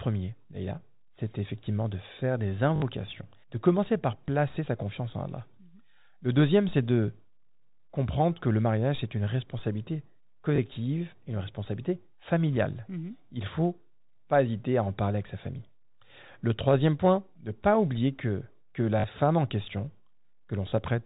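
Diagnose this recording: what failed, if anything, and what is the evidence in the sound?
Network fault, packet loss with last packet repeated: 20 ms blocks replay at 2.76–2.82, 4.26, 10.56–10.58, 19.00–19.04 and 20.70–20.72 s. The waveform shows identical copied blocks.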